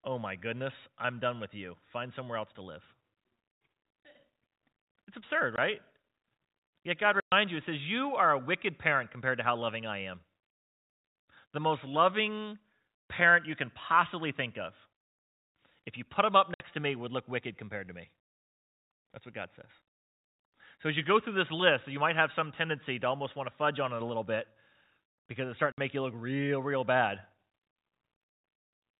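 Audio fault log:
5.56 s, packet loss filled with silence: a single 20 ms dropout, the length of one typical 20 ms voice packet, with hard edges.
7.2 to 7.32 s, packet loss filled with silence: a 120 ms hole just before "you it says", about six packets' worth.
16.54 to 16.6 s, packet loss filled with silence: 60 ms gap between "you put him up" and "to me would look".
25.72 to 25.78 s, packet loss filled with silence: 60 ms gap between "because it's starting" and "make you look real". The receiver just plays dead air for the missing packets, so the cuts snap in and out. All this rides on narrowband G.711 telephone audio.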